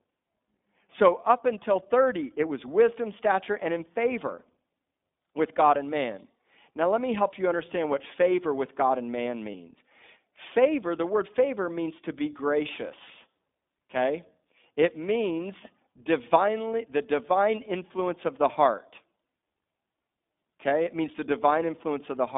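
iLBC codec coding runs through the whole clip: the speech is confined to roughly 200 Hz to 3.6 kHz, with nothing above, and each 20 ms frame's excitation is coded on its own, which fits iLBC's 15.2 kbps mode. The result is plainly rough, slightly synthetic speech.

Lost iLBC frames appear from 9.52 to 9.55 s, where one 20 ms frame went missing. The decoder filled the gap by repeating the last pitch cycle blended with noise, heard as a brief buzzy, held vowel before the voice recovers immediately.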